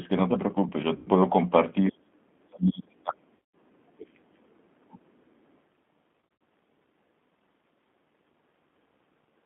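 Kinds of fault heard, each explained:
G.729 codec: an 8 kbit/s speech codec; the whole clip sits in a 200 Hz to 3.5 kHz band and sounds plainly rough and synthetic.
VoIP packet loss concealed by the speech codec: lost packets at 0.96, 3.36 and 6.21 s are filled by decoder extrapolation, heard as buzzy, stretched sound fading over 100 to 180 ms.
Speech suppressed in double talk: the speech dips by about 25 dB near 1.9 s and up to about 40 dB from 2.47 to 4.98 s, likely the echo canceller ducking during overlap.
Other side's voice leaking through: a faint second voice, about 20 dB below the speech, appears briefly at 2.03 to 2.1 s, likely loudspeaker echo left uncancelled.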